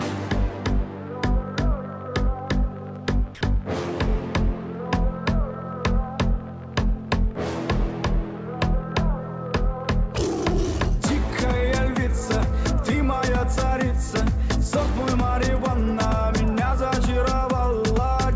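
From 3.35 to 3.41 s, sound dropped by the voice detector is likely: 60 ms of flat, low-level noise replaces the audio, appearing as featureless spectrogram texture below the 8 kHz ceiling.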